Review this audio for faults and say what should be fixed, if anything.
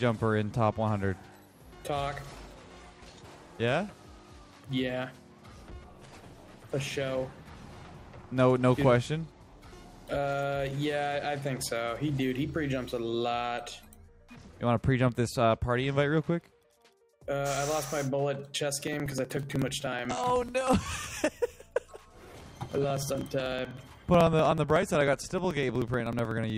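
A call bitrate drop occurred from 5.62 to 7.53 s. The bandwidth estimate collapsed and the encoder was pushed from 96 kbps down to 24 kbps, staying at the bottom for about 1.85 s. With so few bits, the codec quantises coarsely and sheds upper frequencies, so the sound turns dull, rough and watery before detail returns. Prevent it by smoothing the bandwidth estimator and setting a higher minimum bitrate floor.

Periodic USB or driver dropouts run from 18.81 s to 26.50 s. A background process is stalling the USB bus or audio driver every 0.062 s, and each stall skips a couple of milliseconds of audio outright rather than filling it with silence. Because these gaps join the waveform abruptly, they produce a steady train of ticks, roughly 16 per second and well over a hundred in total, audible wherever signal is present. Prevent it by finding and rescheduling the polling task or updating the driver, and by giving the audio thread real-time priority.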